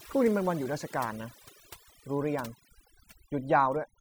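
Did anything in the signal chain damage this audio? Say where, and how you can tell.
Yes: overdone noise removal in call processing, throughout. Bands near the noise estimate get gated out, leaving twinkling specks in near silence and quiet parts of the speech removed with them; a spectrogram shows scattered isolated blobs and holes.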